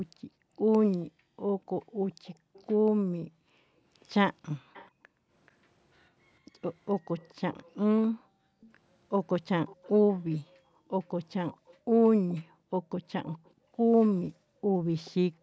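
From 0.13 to 6.61 s the room background is gated by the echo canceller. While far-end audio plays on the loudspeaker, the canceller clamps the microphone by about 40 dB, so the background dips or vanishes for around three seconds in total before recovering. Within that stretch, at 1.82 to 2.64 s and again at 4.73 to 4.90 s, a faint delayed copy of the speech appears 432 ms behind the original, roughly 30 dB and then 25 dB down. This echo leak is likely an echo canceller at the loudspeaker end failing to remove everything its microphone picked up and sending the residue back. A longer leak at a similar level runs from 7.18 to 13.51 s. During it, the background gates again at 8.21 to 8.54 s and 10.68 to 10.93 s, and once more from 12.44 s to the end, with dropouts totalling about 1.5 s. The call's microphone processing limits the band to nothing above 8 kHz.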